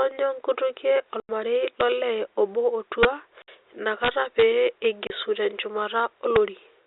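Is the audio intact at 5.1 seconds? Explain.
No. A dropout from packet loss filled with silence runs from 5.07 to 5.10 s. A single lost packet leaves a 30 ms hole of dead silence in the speech. The cuts at both edges are abrupt.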